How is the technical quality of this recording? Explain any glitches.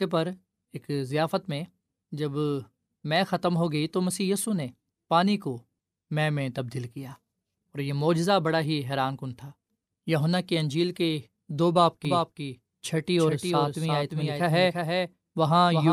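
The recording has one clear glitch near the end. From 12.05 s to the end, a doubled audio track appears: the speech is heard twice, a second full-band copy trailing about 0.4 s behind and about 5 dB quieter. It likely comes from a second, slower capture path or misaligned edit. The waveform and spectrogram would show each syllable repeated as a fainter, undecayed duplicate that switches on abruptly.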